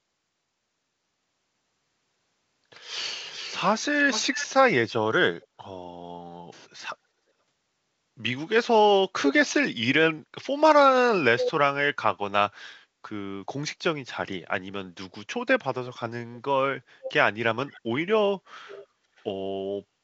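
At 3.29–4.47, 5.42–5.47, 11.39–11.52, 17.03–17.12, 17.7–17.8 and 18.68–19.24 s, an echo leak sends the speech back 411 to 480 ms late and roughly 5 to 35 dB down. It is likely an echo canceller missing loudspeaker pickup. Unlike reverberation, it is a distinct delayed repeat rather than a smooth tail.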